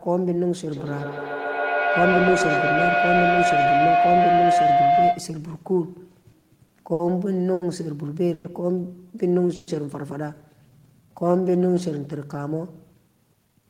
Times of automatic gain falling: none

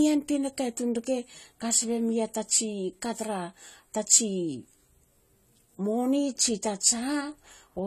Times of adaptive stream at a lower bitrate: none

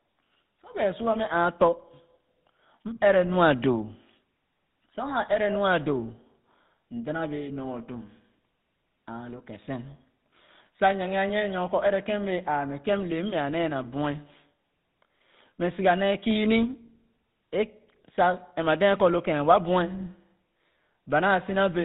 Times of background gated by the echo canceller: none

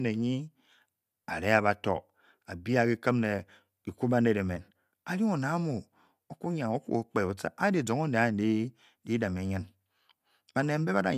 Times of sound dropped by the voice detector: none

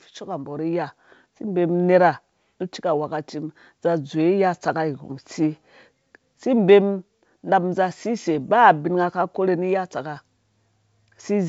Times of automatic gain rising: 0.24-1.82

